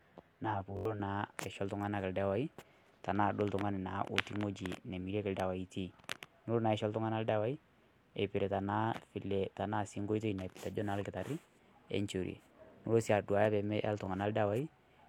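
Speech opens with channel delay (comb filtering) from 0 to 1.0 s: one channel lags roughly 10 ms, so the mono sum cancels at evenly spaced notches from about 40 Hz upward, giving a steady hollow, phasey tone rather than any break in the sound. A repeated buffer stutters from 0.77 to 0.85 s, where a roughly 21 ms piece, which fits a 1024-sample buffer, plays several extra times with hard joins. The same fault recurs once at 14.06 s as a single brief repeat. Unlike the comb filtering, these are audible discontinuities, not a change in tone colour.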